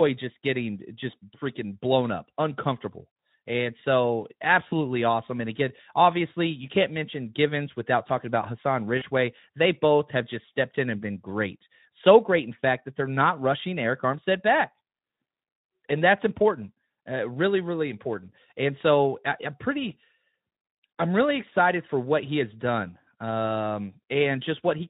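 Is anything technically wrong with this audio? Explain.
Yes. VoIP packet loss concealed by the speech codec occurs at 4.67–4.74 s and 8.97–9.04 s. Each time, about 40 ms of packets went missing and the decoder extrapolated from its last pitch and filter state. The speech smears into a brief, fading buzzy tone or coloured noise and stays weak until the decoder recovers.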